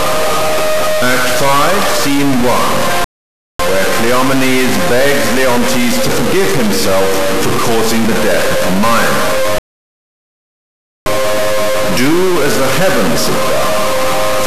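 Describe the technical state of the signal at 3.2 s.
At 3.2 s the sound is in a rebuffering stall. It cuts to silence at 3.04 s and resumes at 3.59 s, exactly where it stopped. The player ran dry of downloaded audio and waited for more. Nothing is lost, but about 0.55 s is added.

A distortion also runs through the whole clip, including this moment. Quiet stretches fill with noise. This is likely a stuck bit, one data bit held at a fixed value by a faulty line or converter, skewing about half of all sample values.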